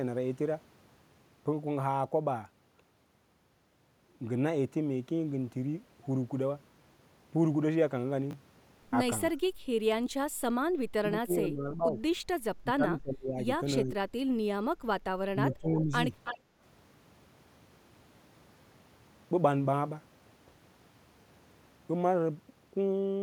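At 8.31 to 8.33 s, chunks out of order: one 10 ms slice plays a chunk late, giving a brief jumbled blip rather than a gap or dropout.

Between 9.31 and 15.92 s the speech dips and thins in pieces at 9.31 to 9.42, 10.92 to 11.83, 12.64 to 13.38, 13.83 to 13.96 and 15.32 to 15.92 s. It falls by about 10 to 30 dB, deepest near 11 s. This is likely speech suppressed in double talk, unlike clean dropouts.

At 16.24 to 16.38 s an echo leak adds a scrap of sound trailing about 325 ms behind, only about 5 dB below the speech. Its likely cause is an echo canceller missing loudspeaker pickup, which sets it apart from room reverb.

Right after, at 16.4 to 16.6 s, the background is gated by the echo canceller. The room sound ducks by about 8 dB for 0.2 s, then returns.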